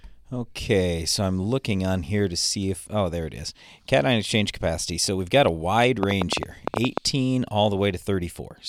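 From 6.03 to 6.99 s there's a train of clicks: around ten sharp ticks, about 10.6 per second but unevenly spaced, poking well above the speech, about 20 dB. It's likely interference from nearby gear or a faulty connection or power supply injecting pulses.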